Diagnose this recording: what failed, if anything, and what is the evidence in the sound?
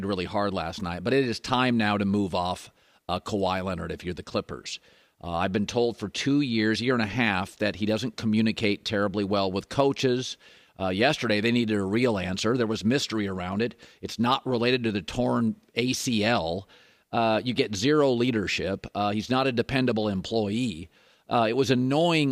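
No fault can be heard.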